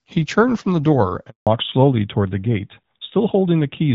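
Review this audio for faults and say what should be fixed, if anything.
A handover gap silences the speech from 1.29 to 1.47 s. That is 180 ms with no frames while the call switched networks. Whatever was said there is lost.

A fallback to narrowband follows at 1.47 s and lasts to the end. The wideband sound, which fits AMR-WB at 12.65 kbit/s, drops to a narrowband codec. Nothing remains above 4 kHz, so the speech turns duller.

To prevent both, keep the call on one network with HD Voice supported end to end, so no handover or codec downgrade occurs.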